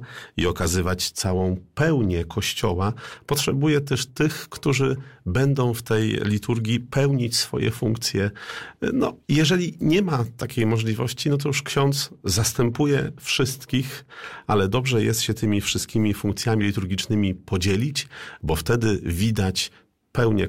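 No technical faults are audible anywhere in the audio.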